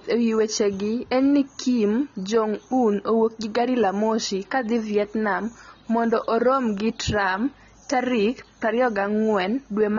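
From start to end the speech carries AAC compression damage, likely from a low-bitrate stream around 24 kbps: dull, warbly sibilants, with the spectrogram showing nothing above 7 kHz.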